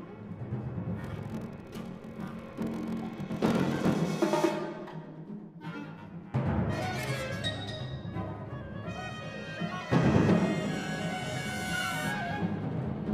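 From 1.0 to 3.96 s there is a block size mismatch (padded): one stage hands over shorter blocks than the next reads, and each block is topped up with zeros. The sound takes on a 43.1 Hz buzz, which fits a 1024-sample read block, and runs at 0.861 times speed at about its normal pitch. On a waveform, regular silent notches repeat at that rate; a spectrogram shows thin vertical gaps and harmonic buzz lines.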